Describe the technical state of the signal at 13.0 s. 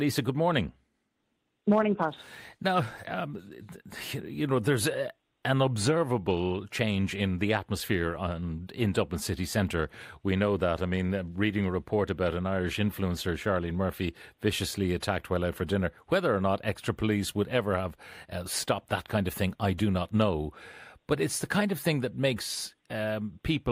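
At 13.0 s the speech signal is intact, with no dropout, distortion, or other technical fault at that moment.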